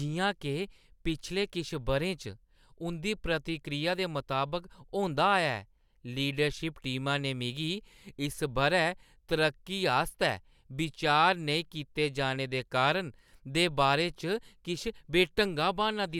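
Nothing technically wrong can be heard in this speech recording, with no dropouts, glitches or other disturbances in the signal at any point.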